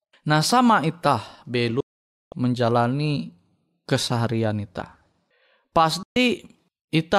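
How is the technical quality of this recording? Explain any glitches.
The recording has two digital broadcast dropouts. At 1.80 to 2.33 s and 6.03 to 6.16 s the speech fades out within about 3 ms into silence lasting 0.51 s, then 0.13 s. The receiver likely lost frames or rejected corrupted ones and muted until clean data returned, so that speech is gone.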